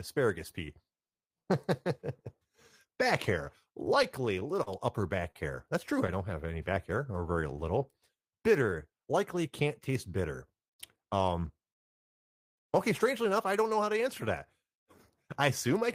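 From 4.03 to 4.69 s, just after "back hair" and before "upper back hair", the speech shows repeated stalls (stutter). Packets arrived late four times, and each time the receiver stretched the last sound to fill the gap, about 57 ms in all, the longest 35 ms. Nothing is lost, but the phrase drags and catches.

At 5.31 to 5.37 s, after "upper back", a short stall from a late packet holds the sound for 42 ms while the receiver waits for the packet. The sound is sustained unnaturally with a slight buzz or dip, and the playout delay rises by 42 ms from that point.

A jitter buffer slow-down runs from 6.46 to 8.71 s, between "true I don't have" and "likely can't taste bitter". The receiver repeated pitch periods and pause fragments to rebuild its reserve, adding 117 ms, so the speech plays at 95% speed with unchanged pitch and slightly drawn-out syllables.

From 10.96 to 13.05 s a jitter buffer speed-up trims the excess delay. 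The receiver cut short pieces of one or a few pitch periods, removing around 150 ms in total. Speech runs at 107% speed at the same pitch and sounds somewhat hurried.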